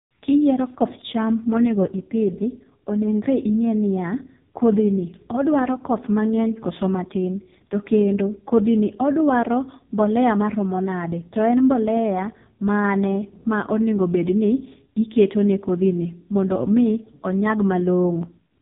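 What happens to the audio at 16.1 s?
At 16.1 s, as throughout, the AMR narrowband mobile codec cuts everything above 3.8 kHz, and its heavy damage, which fits the 4.75 kbps mode, leaves the speech buzzy and synthetic.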